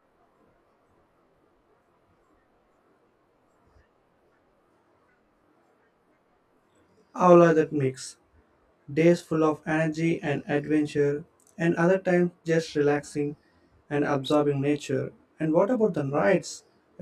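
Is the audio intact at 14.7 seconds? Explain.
No. At 14.7 s the speech carries channel delay (comb filtering), present through the whole clip. One channel trails the other by about 20 ms, and when the two are summed to mono, the content they share cancels at evenly spaced frequencies, the first notch sitting around 20 Hz. Those fixed notches run up through the spectrum, giving the speech at this point a rough, slightly doubled sound.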